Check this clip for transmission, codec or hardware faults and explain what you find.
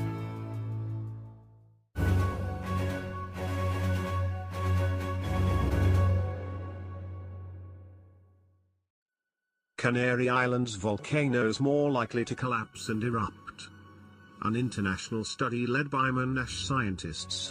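One fault is present: channel delay (comb filtering), from 12.42 s to 17.19 s. During this stretch one channel arrives late by roughly 0.7 ms, and when the two are summed to mono, the shared content cancels at evenly spaced frequencies. The first notch falls around 700 Hz, with further notches repeating at regular intervals above it. The audio takes on a hollow, phasey colour with a thinned lower midrange.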